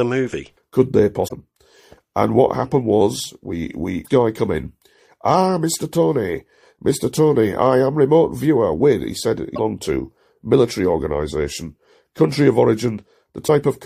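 Four short glitches break into the speech, at 1.24 to 1.32 s, 4.01 to 4.08 s, 9.52 to 9.59 s and 13.44 to 13.50 s, each roughly 60 to 80 ms long. They're damaged data in the compressed stream: a few bytes arrive wrong, the decoder can't make sense of those frames, loses sync and scrambles to find the next valid frame header. What you hear is a chirp, squawk, click or short hole before the speech picks back up.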